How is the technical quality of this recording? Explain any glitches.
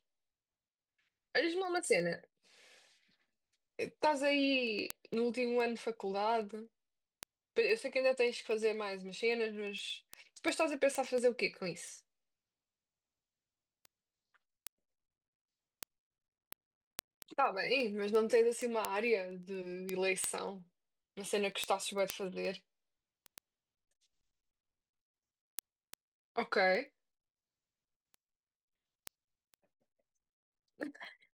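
The recording has a clear clocking problem. From 0.14 to 31.28 s there are word clock ticks, sharp clicks about ten times a second, a few hundred in all. The receiver isn't locked to the sender and drifts a couple of hundred ppm, so a sample slips at each step.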